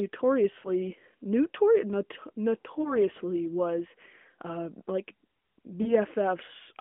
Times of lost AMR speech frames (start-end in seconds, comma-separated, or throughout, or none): 0.60-0.69, 2.82-2.95, 5.82-5.95